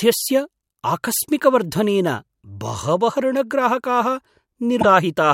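Near the end, from 4.79 to 4.85 s, damaged data in the compressed stream throws the decoder off sync, leaving a brief glitch while it hunts for the next good frame.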